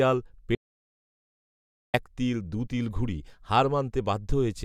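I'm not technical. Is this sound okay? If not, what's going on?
No. There is an audio dropout to silence from 0.55 to 1.94 seconds: the speech stops partway through and comes back about 1.4 seconds later. The gap is completely empty, with not even the faint background hum of the room, which likely means the microphone or its connection briefly cut out while the recording kept running. Whatever was said during that stretch wasn't captured and can't be recovered.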